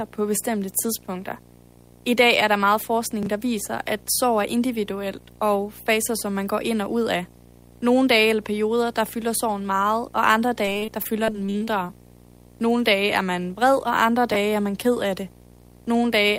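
Throughout, a screen or video cable couples into the audio path, producing video or display buzz: a 60 Hz field-rate buzz with hash above it, sitting roughly 25 dB below the speech.

At 3.23 s, chunks out of order: an 11.61 ms chunk lands two chunks late, giving a brief jumbled moment with hard joins.

From 10.65 to 11.91 s, repeated packet loss (robotic sound): about a dozen holes, the longest 40 ms, are patched by stretching the previous sound. About a fifth of the stretch is concealed, so the speech turns choppy, with pieces missing.

At 14.32 s the same chunks-out-of-order fault recurs, with an 11.61 ms chunk arriving two chunks late and a short garbled jump.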